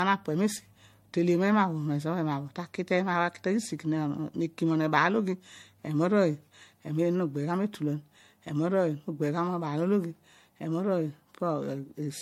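Generation loss runs through the whole clip. The speech sounds swirly, hollow and smeared. Attacks are blurred. Nothing is heard above 16.5 kHz. This likely comes from about four MP3 passes, consistent with 64 kbit/s, each adding fresh quantisation noise and spectral holes.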